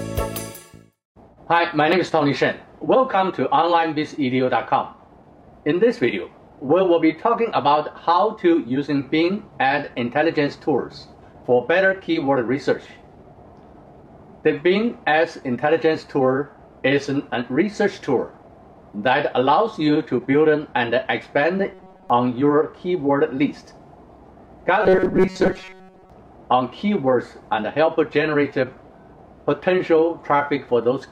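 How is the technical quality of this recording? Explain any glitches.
Robotic sound from repeated short buffers appears twice, from 21.74 to 22.10 s and from 24.83 to 26.10 s. The likely cause is audio arriving too seldom, so playback loops a roughly 5 ms fragment, which fits the fixed 188 Hz metallic buzz. Most of the underlying sound is skipped, leaving only its rough outline.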